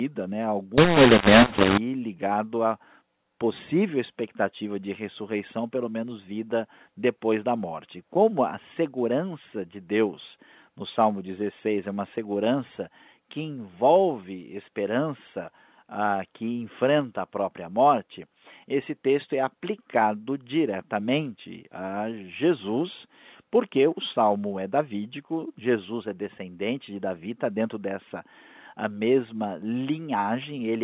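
From 0.78 to 1.78 s, just before "ligado a", the decoder has the mu-law and A-law mixed up: telephone speech coded with A-law is read back as mu-law. Each 8-bit code lands on the wrong step of the logarithmic scale, so some levels come out too large and others too small, and the quietest samples jump well above silence. For that second the speech turns harsh and distorted, and any gaps fill with noise, before the A-law telephone coding resumes its narrowband sound.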